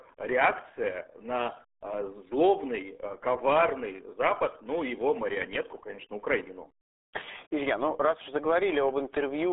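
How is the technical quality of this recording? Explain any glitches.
Quality is poor throughout, because the whole speech recording carries RealAudio 14.4 codec damage. From start to finish the band sits roughly between 300 Hz and 3.5 kHz, with nothing above 3.8 kHz, and the heavy coding at what sounds like an 8 kbit/s rate leaves the voice muffled and gargly. A plain telephone band-limit would keep speech clean inside that band. Here the distortion within the band, that gargly quality, marks it as the dial-up-era speech codec rather than simple filtering.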